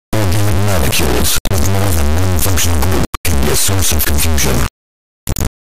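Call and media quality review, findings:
Harsh, extremely loud square-wave buzz for the whole clip, slamming between silence and the clipping limit, dropping out in the quietest stretches. Integer read as float in the format or decode stage: 32-bit integer samples interpreted as 32-bit float, producing tiny, invalid or enormous values.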